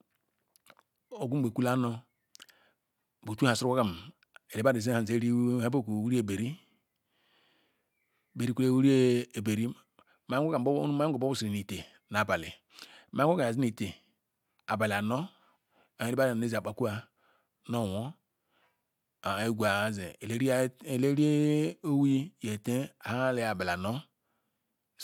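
Nothing stood out as a technical problem at any point on listening to the recording.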